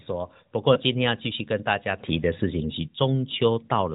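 At 0.74 s a single lost AMR speech frame interrupts the speech for about 20 ms, ending by 0.79 s. The frame evidently failed its integrity check, so the decoder filled the gap by repeating the previous pitch and spectral envelope at reduced gain. The result is a short dip or warble before normal decoding resumes. The surrounding narrowband AMR coding sounds consistent with the 12.2 kbps mode, with only light coloration and nothing above 4 kHz.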